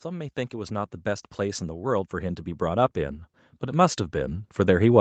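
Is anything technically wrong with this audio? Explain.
Yes. From 0.05 s to the end, there is automatic gain rising. The gain control judged the speech too quiet and kept raising its level. Voice and background swell together.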